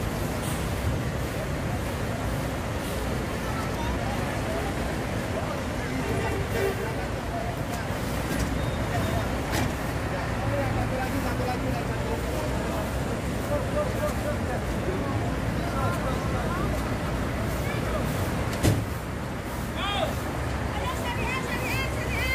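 No technical faults are audible anywhere in this audio.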